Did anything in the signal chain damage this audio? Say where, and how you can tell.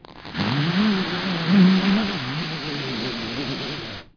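No, nothing in the chain audibly damaged these sounds, and no stage leaves any trace to point to.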